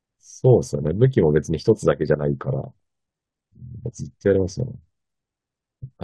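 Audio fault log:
2.57–3.29 s, DAB burbling: weak reception let bit errors, on the order of a few in every thousand, slip past the error correction into the MP2 audio data. Corrupted samples put short blips of noise in single sub-bands, and corrupted scale factors make individual sub-bands leap in level for up to a frame. Across this 0.72 s stretch the speech is overlaid with burbling from a continuous run of 30 damaged frames.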